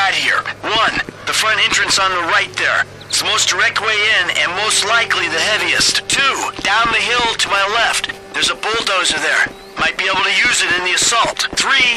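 No technical faults can be heard anywhere in this audio.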